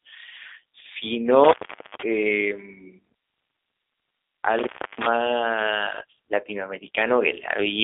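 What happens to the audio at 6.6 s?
At 6.6 s the speech carries the same G.729 codec damage heard across the whole clip, not a separate event. The band sits at roughly 300 Hz to 3.6 kHz, with nothing above 3.7 kHz, and the timbre is plainly rough and synthetic. That fits an 8 kbit/s G.729-type coder, which rebuilds speech from a vocal tract filter, a pitch predictor and a few coded pulses per frame rather than sending the waveform itself.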